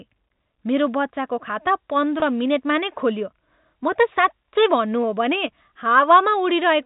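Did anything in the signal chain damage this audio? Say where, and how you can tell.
Yes, on the network. At 2.20 to 2.22 s, just before "मिनेटमा नै खोलियो", about 20 ms goes missing. The gap is bridged by a brief held, buzzy tone. That is packet loss with pitch repetition: the receiver repeats the last pitch period. The short gap fits a single lost packet.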